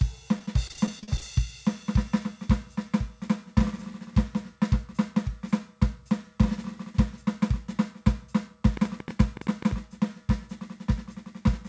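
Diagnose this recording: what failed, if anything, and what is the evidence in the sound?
Repeated packet loss at the network stage, 0.39 to 1.22 s. Ten gaps up to 40 ms are patched with repeated audio. The music turns choppy and robotic.

A train of clicks, 8.77 to 9.72 s: about ten irregular pops, 11.7 per second, about 5 dB above the music. Likely interference in the analogue wiring.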